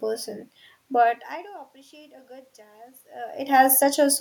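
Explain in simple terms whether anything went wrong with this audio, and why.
Right after "but I do", around 1.9 to 3.8 seconds, the automatic gain rising kicks in: the level drops, so the system slowly turns itself up, and the room noise swells along with the voice.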